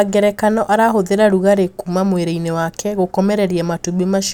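No dropouts, distortion, noise bursts or timing errors can be heard anywhere in the recording, so there is nothing to report.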